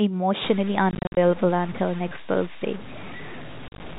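From 0.44 s to the end, the speech was most likely reduced to about 5 bits by truncation without dither, which is the low bit depth without dither fault. Rounding error that coarse tracks the signal instead of spreading as even hiss, so the voice turns rough and grainy, with distortion riding only a little under the level of the speech itself, and quiet tails fall away or sputter between steps.

Against that, packet loss filled with silence cuts holes in the speech twice. Between 0.91 and 1.17 s, about 170 ms of audio is missing in short gaps, the longest about 50 ms. Between 3.68 and 3.80 s, about 80 ms drops out, with runs up to 40 ms. The gap lengths point to packets of about 10 ms. Each hole starts and stops abruptly, giving a stuttering chop. The G.711 A-law telephone coding underneath keeps the usual 4 kHz narrowband ceiling.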